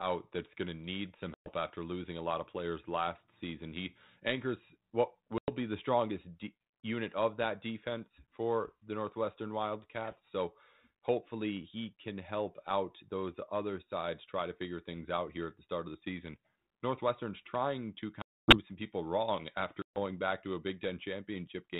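Packet loss on an ADPCM call: hard silent gaps at 1.34 s (after "going to need some"), 5.38 s, 18.22 s and 19.82 s, lasting 100 to 260 ms. Unlike a clean dropout, the sound then returns slightly distorted, settling over tens of milliseconds as the decoder's predictor resynchronises.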